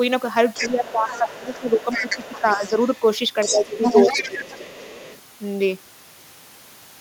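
A second, fainter voice runs underneath the talker from 0.54 to 3.04 s, roughly 10 dB below the main speech, then returns from 3.4 to 5.19 s, louder this time at only about 5 dB down. This is the other side's voice leaking through. The talker's device is playing the far end on a loudspeaker, and the echo canceller has likely left part of that playback in the microphone signal, so the remote talker is heard as well.

While that second voice is present, the talker's own speech sinks and thins. From 0.57 to 2.1 s it drops by around 10 dB for roughly a second in total. There is a brief, shallower dip of about 5 dB from 2.42 to 2.63 s. Two deeper cuts of around 15 dB follow, from 3.52 to 3.87 s and from 4.18 to 4.73 s. This is speech suppressed in double talk: with both sides speaking at once, the echo canceller likely could not tell its own talker from the loudspeaker echo and turned everything down together.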